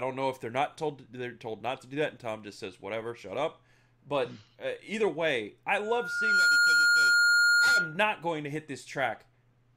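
At 5.80 s a loudspeaker feedback squeal begins: a pure tone at 1.4 kHz swells over under a second until it sits about 10 dB above the speech, then holds until it cuts off at 8.00 s. The microphone was hearing its own loudspeaker, and at that one frequency the loop gain passed unity, so the tone fed itself. A spectrogram shows a single bright horizontal line thickening in from the left; the waveform's envelope ramps up and plateaus.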